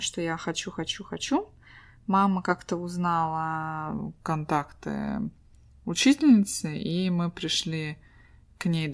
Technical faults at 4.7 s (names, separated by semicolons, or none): wrong sample rate